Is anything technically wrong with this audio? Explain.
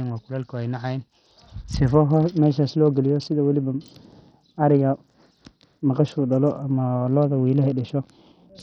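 Yes, throughout the speech there is heavy coding damage, likely from Bluetooth SBC compression, consistent with a low setting around 64 kbps. With so few bits, the upper sub-bands are starved and the rest coarsely quantised, so the treble drops out and flickers while a gritty, aliased noise sits on the voice.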